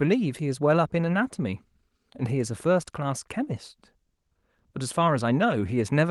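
No technical faults are audible.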